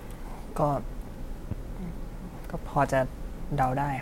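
A sudden voltage step or pulse, likely from a plug, switch, static discharge or driver glitch, was added to the signal path at 1.51 s to 1.54 s. The stages after it shaped that pulse into a single loud pop, a sharp thump peaking about 10 dB above the speech. It lasts only a few hundredths of a second and sits on top of the talking, which carries on underneath without a break.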